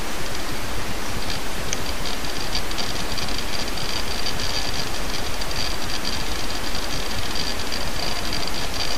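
The sound has a brief click or tiny skip at 1.38, 4.32, 5.30 and 7.28 s, caused by overlap between stream segments. The segments here are 1 s long. Where two of them claim the same stretch of time, the player discards the overlapping part even though that sound existed only once, so 8 to 12 ms goes missing and the waveform jumps straight across the gap. The skips fall near segment boundaries, not at every one.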